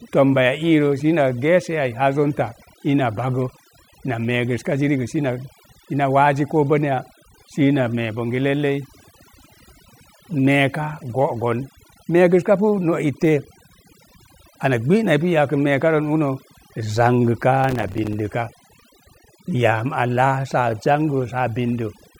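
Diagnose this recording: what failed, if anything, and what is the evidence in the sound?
Overdone noise removal in the processing stage runs throughout: a near-silent background with twinkling specks, and quiet parts of the voice removed along with it. The spectrogram shows blackened gaps and isolated bins.

Processor overload crackle at the driver or buffer stage runs from 17.64 to 18.13 s. About twenty missed buffers of roughly 5 ms each left hard-edged silent gaps, which appear on the waveform as repeated dropouts.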